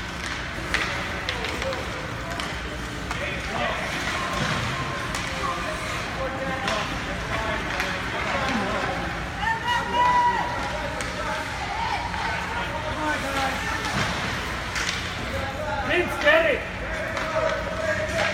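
Nothing here catches the ear as a technical fault; the audio just runs along without a hitch.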